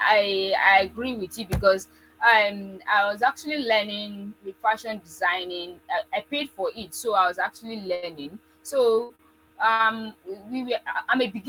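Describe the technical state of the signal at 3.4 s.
At 3.4 s the speech signal is intact, with no audible fault at that moment.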